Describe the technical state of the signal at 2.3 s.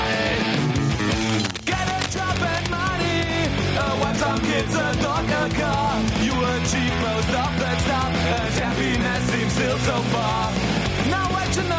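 At 2.3 s the signal carries cable scratch noise, running from 1.17 s to 2.67 s. Dense, uneven bursts of crackle and rustle sit over the sound, roughly 10 dB below it. The likely cause is a worn cable, connector or control being moved. Its contact resistance jumps about rapidly, and each jump lands in the signal as a small burst of noise.

Gain pumping is also present here, as it is across the whole clip. The level swings by around 5 dB. The likely cause is gain set far too high for the microphone, with a fast limiter or compressor pulling it back down on every peak. Loud and quiet parts are squeezed closer together. The band stops near 8 kHz, which fits call microphone processing.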